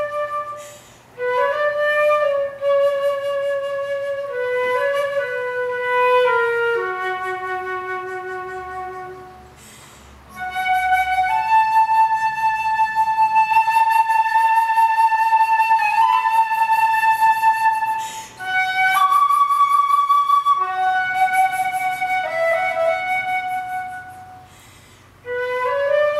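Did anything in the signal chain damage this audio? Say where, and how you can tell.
No, nothing in the signal chain stood out as damaging this audio when I listened to it.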